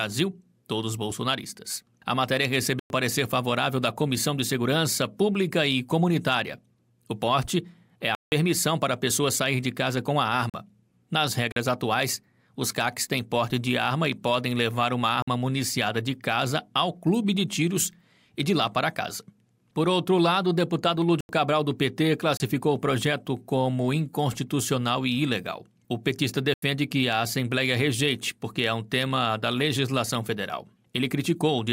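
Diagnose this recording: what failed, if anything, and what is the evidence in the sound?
The failure is at the driver or buffer stage: eight blocks of digital silence, with hard cuts to silence. They fall at 2.79 s (107 ms), 8.15 s (171 ms), 10.50 s and 11.52 s (43 ms each), 15.22 s (53 ms), 21.21 s (85 ms), 22.37 s (29 ms) and 26.54 s (85 ms). Several gaps are power-of-two multiples of 43 ms, which fits 2048-sample buffers at 48 kHz. The output buffer was likely not filled in time, so zeros were played.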